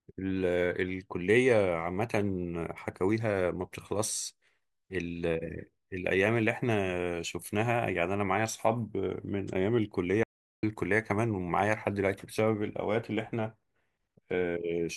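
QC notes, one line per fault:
10.23–10.63 s, audio dropout to silence: the speech cuts off abruptly mid-flow and the next 0.4 s is dead silence, with no room tone or background hiss underneath, before the sound returns just as suddenly at 10.63 s. Whatever was spoken across that gap is simply missing. A hole this clean likely means the input was lost briefly, through a dropped connection or momentary mute, while recording carried on writing silence.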